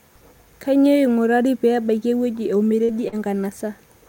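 About 40 ms of the call reached the decoder too late twice, at 2.84–2.91 s just after "pee ebaiki ewueji" and again at 3.08–3.15 s. This short concealed packet loss was patched by extending the preceding sound, leaving brief smeared wobbles in the speech.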